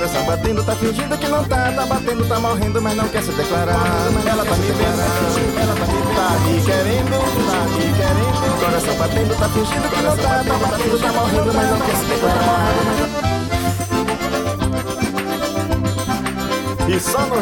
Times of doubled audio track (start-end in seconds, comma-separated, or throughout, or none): 3.73-13.05